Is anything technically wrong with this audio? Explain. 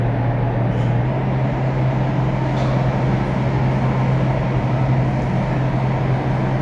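Yes. From 1.05 s to the end, a wrong sample rate: audio plays about 1.09 times fast without resampling, fitting 22 kHz material run at 24 kHz, so it sounds hurried and 1.47 semitones sharp.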